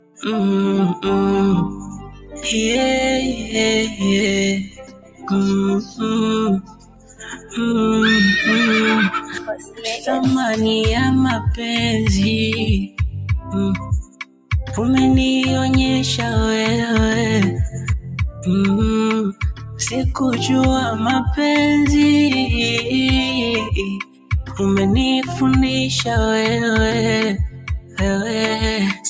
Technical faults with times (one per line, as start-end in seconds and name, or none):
0.00-29.09 noise suppressor applied to music or sounds
0.00-7.58 sound cut by the noise suppressor
9.21-10.08 sound cut by the noise suppressor
12.87-14.51 sound cut by the noise suppressor
17.72-19.81 sound cut by the noise suppressor
23.63-25.35 sound cut by the noise suppressor
27.49-28.01 sound cut by the noise suppressor